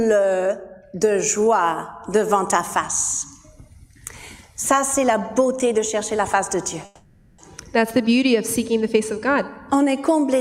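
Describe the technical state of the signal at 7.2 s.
At 7.2 s the signal is inside a call audio freeze running from 6.85 to 7.40 s. For about 0.53 s the last sound is stretched into a fading buzz or hiss that never drops to silence. The likely cause is that packets were held up in transit and the jitter buffer emptied, so the receiver improvised. When delivery resumes the audio picks up where it stopped, nothing lost but now 530 ms late.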